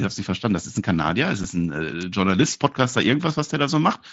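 A speech recording carried over a wideband mSBC Bluetooth headset link, whose 8 kHz ceiling shows as a flat top edge on a spectrogram, has two faults. At about 1.44 s, unconcealed Bluetooth headset packet loss cuts a hole of roughly 7.5 ms, consistent with a single lost frame. Silence or an idle pattern takes the place of the lost audio, so the speech breaks off abruptly and the spectrogram shows a thin vertical strip with hard edges that can click. From 2.01 to 2.03 s there is a sharp snap, likely an electrical switching spike from a nearby switch, motor or static discharge coupling into the line. The waveform shows a tight burst of tall, narrow peaks on top of the speech, and the spectrogram shows a bright vertical streak spanning the full band.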